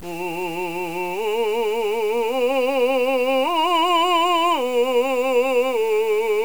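Right from the start and all the way through, the music has a grainy, gritty edge that tracks the playing, the classic sound of low bit depth without dither. It's likely truncated to about 6 bits, leaving distortion only around 25 dB down, roughest in quiet passages.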